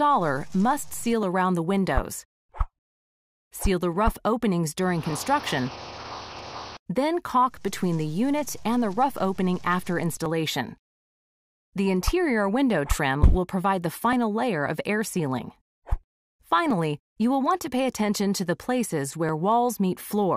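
From 1.23 s to 19.29 s, a short click recurs every 1.29 s, roughly fifteen in all, each landing wherever there is signal. The likely cause is clock drift buffer slips: two devices running on separate clocks, mismatched by something like 500 parts per million, so the buffer between them slowly drifts until a few dozen samples are dropped or repeated at once. The strictly even spacing sets this apart from network packet loss or random dropouts, whose glitches arrive irregularly.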